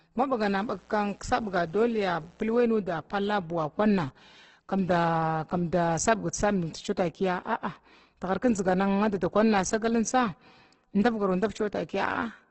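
Opus compression runs through the whole speech clip: grainy, rough tones and nothing above 8.2 kHz, likely a music-mode encode near 12 kbps filling starved bands with noise. Mains buzz from 0.57 to 2.65 s is a faint, steady, raspy buzz of 60 Hz harmonics from switching spikes leaking in twice per mains cycle.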